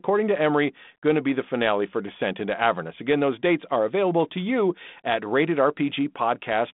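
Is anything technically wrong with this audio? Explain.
No, nothing is technically wrong with this audio.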